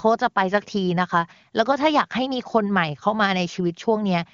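Speech carried over the AMR wideband (HD Voice) codec at 23.85 kbit/s, with nothing technically wrong with it.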